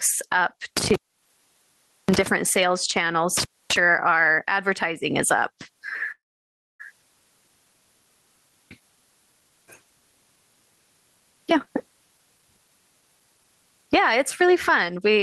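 Throughout the speech the level swings by roughly 20 dB. This is gain pumping, likely from input gain set far too high with a fast limiter clamping each peak, leaving the dynamics squashed.

From 0.77 to 2.27 s, and again from 3.37 to 3.77 s, an intermittent contact opens for about 1.13 s and then 0.27 s. The sound cuts out with crackle at each edge, leaving only faint hiss while the connection is broken.

At 6.11 s a call audio freeze begins. The last sound trails into a fading fill, then about 0.63 s of silence, likely because delayed packets drained the jitter buffer. At 6.82 s the speech resumes where it stopped, so 0.68 s of gap was inserted and nothing was lost.

From 13.87 to 15.17 s a jitter buffer speed-up trims short pitch-period slices, roughly 70 ms in total, to shrink the excess delay. The speech runs at 105% speed with unchanged pitch and sounds hurried. Through the Opus call path the top end stops at 12 kHz, which fits a low bitrate of around 20 kbps.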